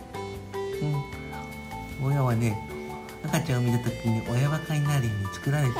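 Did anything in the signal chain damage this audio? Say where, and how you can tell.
Yes. A crude rate conversion at the sample-format stage, from about 1.43 s to the end, repeats samples with no filtering, consistent with a 44.1 kHz to 48 kHz change. It adds an inharmonic, gritty fizz around 30 dB below the signal that follows loud, bright passages.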